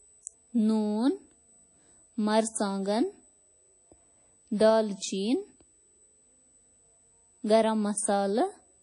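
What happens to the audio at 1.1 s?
At 1.1 s a thin, steady whistle sits at 8 kHz under the speech, roughly 35 dB below it, and it persists from start to end. This is USB whine. The bus services its 125-microsecond microframes 8,000 times per second, and each burst of current ripples through the shared power or ground into the audio path, leaving a fixed-pitch tone at exactly that rate regardless of what is being said.

The speech at that moment also sounds dull and washy, with a hiss that swells and fades along with the voice and a ringing smeared around it. Nothing is present above 10.1 kHz. The likely cause is WMA compression at a low bitrate, consistent with roughly 32 kbps. The transform codec spreads its quantisation noise over long blocks, blurring the sound in time, and discards weak high-frequency components to save bits. The damage is plainly audible throughout the clip.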